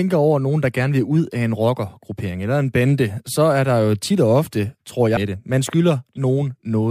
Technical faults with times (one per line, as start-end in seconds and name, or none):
5.16 stream segment skipped